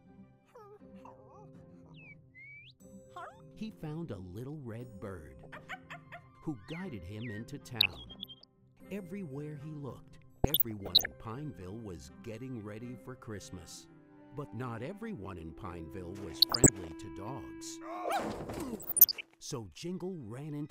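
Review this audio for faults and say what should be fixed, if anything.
DAB burbling at 5.43–5.60 s, 7.80–8.45 s, 10.36–11.12 s, 16.41–16.70 s and 18.68–19.26 s: weak reception lets bit errors of around 0.7 to 1 percent slip past error correction. Corrupted MP2 samples put short blips of noise in single sub-bands, and wrong scale factors make sub-bands jump in level for up to a frame. Fix it by improving reception with a better antenna or placement, or stronger error protection.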